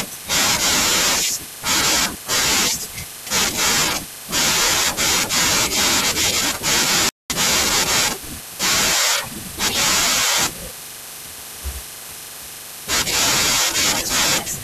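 At 7.09 s the speech cuts out abruptly for 210 ms, resuming at 7.30 s: a playback stall, likely the player running short of data.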